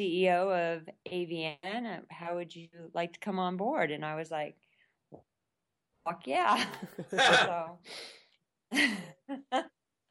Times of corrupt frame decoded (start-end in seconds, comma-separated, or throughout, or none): none